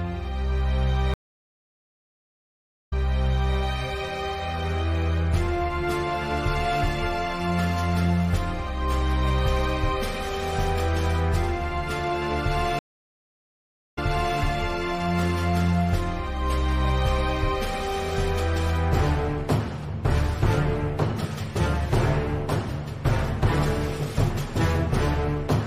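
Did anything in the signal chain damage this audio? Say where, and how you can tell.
Yes. A stream reconnect at the network stage, at 1.14–3.57 s (1.78 s gap, resuming 0.65 s earlier) and 12.79–14.39 s (1.18 s gap, resuming 0.42 s earlier). The spectrogram shows a blank gap, then material repeated from before it, as the server resent a burst to a restarted decoder.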